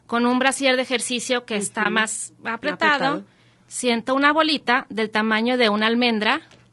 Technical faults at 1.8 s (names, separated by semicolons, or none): low-delay AAC compression; AAC frame loss with muting